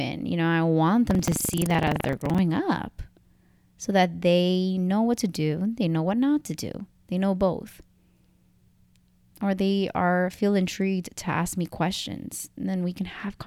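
From 1.07 to 2.40 s, buffer tearing: the ring buffer's writer and reader have slipped, so every period splices in a slice of older audio, giving a 23.4 Hz robotic rattle that fits a 2048-sample buffer. A spectrogram shows regular vertical seams; the waveform, hard steps.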